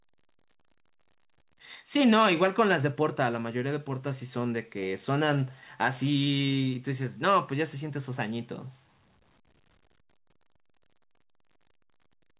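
Nothing technically wrong can be heard in this speech recording. It has come over a WebRTC call path with nothing above 4 kHz, which fits the narrowband G.711 A-law codec at 64 kbps.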